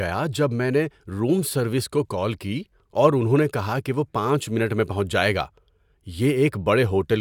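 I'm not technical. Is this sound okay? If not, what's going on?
Yes, no technical faults are audible in this speech recording.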